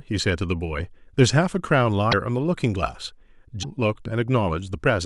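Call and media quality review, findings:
Two brief glitches with the audio skipping ahead, at 2.10–2.13 s and 3.62–3.65 s, each about one 26.1 ms frame; likely a broken MP3 bit reservoir after frames were dropped.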